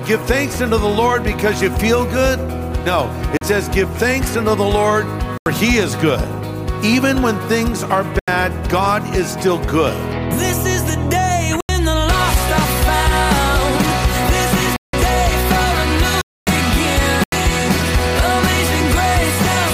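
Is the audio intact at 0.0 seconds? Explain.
Yes, the audio is intact at 0.0 seconds, with no fault present at that moment.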